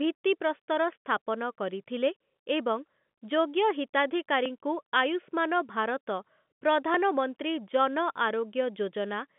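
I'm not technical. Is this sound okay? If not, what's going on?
No. Audio missing between chunks shows up at 4.46 s and again at 6.94 s as two brief skips in the speech, each losing only a sliver, so small that the sound on either side simply butts together. The gaps are about 2.5 seconds apart, which likely comes from the recorder handling sound in 2.5-second pieces and dropping a moment each time it hands over to the next piece. The sound is also limited to the narrow, slightly muffled range of a telephone line.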